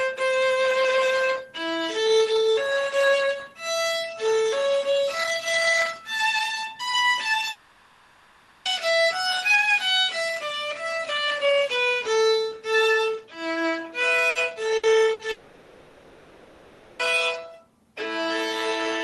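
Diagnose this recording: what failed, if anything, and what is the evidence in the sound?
Long network dropouts at 7.51 to 8.68 s and 15.31 to 17.02 s, a network-stage failure. Each time the audio stops arriving, the receiver stretches the last sound into a buzzy hiss that fades into a low steady noise. Audio then resumes further on, with about 1.1 s and 1.7 s of material gone. The likely cause is a lapse in the network link rather than anything at the sending end.

Bursts of packet loss at 14.29, 14.77 and 15.13 s, also at the network stage, each losing about 60 ms. At each one, the jitter buffer has nothing to play, so concealment holds the last sound as a brief fading buzz or hiss, then jumps ahead with that slice missing. The spacing of roughly 0.4 s and the long dropout right after at 15.31 s point to a connection already failing. The call codec itself, Opus at 20 kbps with a high-frequency cutoff near 12 kHz, is working normally.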